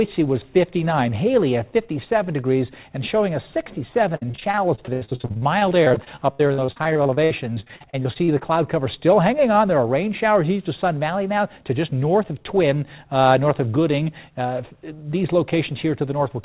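Audio carried over a narrowband call path, with nothing above 4 kHz, shows repeated packet loss (robotic sound) from 4.16 to 8.43 s: dozens of short dropouts, the longest 78 ms, patched by stretching prior sound over about 29% of that span. On a spectrogram this appears as smeared, repeated frames and vertical seams; the waveform shows choppy, looping segments.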